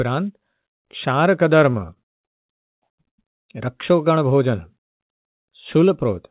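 Speech carried through a narrowband call codec with nothing above 4 kHz, which fits G.711 mu-law, shows repeated stalls (stutter) from 1.72 to 3.2 s: nine brief holds, the longest 96 ms, totalling 280 ms, where the jitter buffer ran dry and the last sound was stretched. Unlike dropouts, nothing is lost; the speech just drags.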